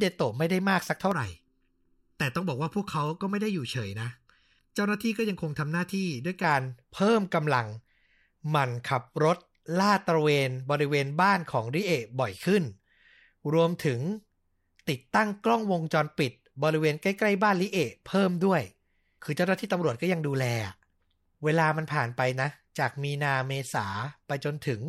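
From 1.12 to 6.44 s the speech turns hollow and phasey, notched from around 700 Hz upward: channel delay (comb filtering), one channel lagging under a millisecond before mono summing.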